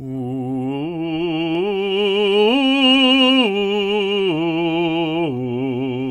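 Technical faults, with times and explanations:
No technical faults are audible anywhere in this music.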